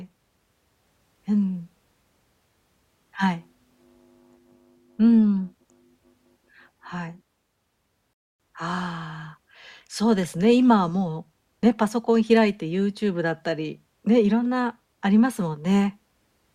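At 8.13 s the speech stops dead and the line goes silent until 8.40 s, a rebuffering stall. The player exhausted its downloaded audio and had to wait for more data before continuing. When playback returns, it picks up at exactly the point where it halted, so no speech is skipped or repeated. The only effect is a gap of about 0.26 s inserted into the timeline, heard as an unnatural pause mid-flow.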